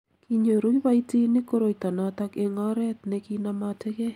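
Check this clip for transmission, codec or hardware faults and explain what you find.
Nothing in this speech recording points to a transmission, codec or hardware fault.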